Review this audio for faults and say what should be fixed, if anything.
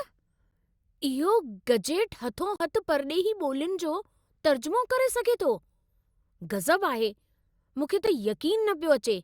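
Three blocks of digital silence interrupt the speech. A 10.7 ms gap at 0.51 s, just before "इहो गजेट", and another at 8.06 s are each heard as a click. A 42.7 ms hole from 2.56 to 2.60 s, between "इहो गजेट" and "परॾेही ॿोल्युनि", is a short dropout. The signal cuts out and back with no fade. The lengths fit buffers of 512 and 2048 samples that went unfilled. To prevent this, increase the processing buffer headroom or priority so the output buffer is always filled on time.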